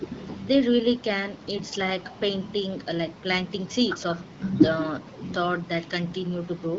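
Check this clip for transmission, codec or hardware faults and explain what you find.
There is one fault: echo with no canceller, present for the whole clip. The far end plays the call through a loudspeaker. Its microphone picks that sound up and sends it back, and nothing removes it. So every phrase returns around a fifth of a second later, about 8 dB quieter. The copy sounds thinner, like a shadow trailing the speech. The AMR wideband (HD Voice) coding sounds clear beneath it.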